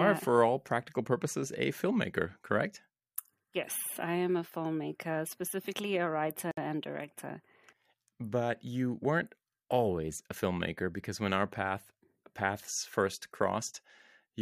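A gap at a join of encoded pieces falls at 6.51 to 6.57 s, right after "filmmaker specifically a writer" and before "and director". Separately encoded pieces were joined untrimmed, so encoder start delay and end padding open a 62 ms break before the speech resumes where it stopped.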